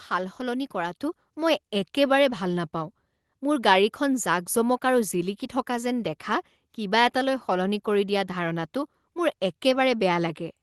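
At about 1.02 s the microphone volume gets stepped up in one go, roughly 4 dB louder, as the call software decides the input's too quiet and bumps the device gain. Voice and room background jump together. The top end stops around 12 kHz, which fits an Opus call path at a modest bitrate.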